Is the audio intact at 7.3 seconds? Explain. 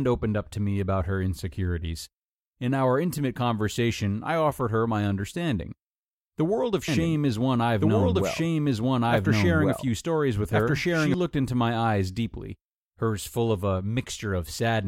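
No. At 7.3 seconds the speech falls inside a doubled audio track that runs from 6.88 to 11.14 s, starting just after "world of" and clearing before "looked into my eyes". A second full-band copy of the same speech sits about one and a half seconds behind, at roughly the same loudness, with no decay or room colouring, and it cuts in and out abruptly. This likely comes from a second, slower capture path or an edit holding two offset copies.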